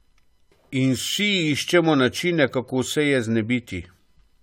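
From start to finish the speech carries a swirly, smeared and hollow quality, with consonant onsets blurred and nothing above 16.8 kHz. This is likely generation loss: repeated AAC-LC encoding, perhaps around four passes at a rate that fits 96 kbit/s, each requantising on a shifted frame grid so holes and noise accumulate. A single encode at that rate would sound cleaner; here the damage is heavier than the cutoff alone implies.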